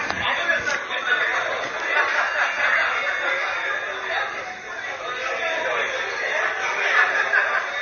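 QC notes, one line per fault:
Throughout: MP3 compression. Nothing is present above 6.6 kHz, and weak detail flickers in and out, giving a watery, swirling texture with smeared attacks. The likely cause is heavy MP3 encoding that starved the treble of bits, which fits a low bitrate around 32 kbps.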